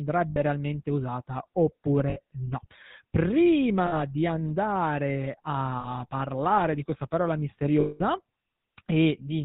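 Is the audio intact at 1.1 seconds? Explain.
No. At 1.1 seconds you're hearing GSM full-rate codec damage, which runs through the whole speech clip. It models the vocal tract and drives it with sparse, evenly spaced pulses, cutting everything above 4 kHz and leaving that plainly buzzy, gravelly roughness, consistent with the 13 kbps coder.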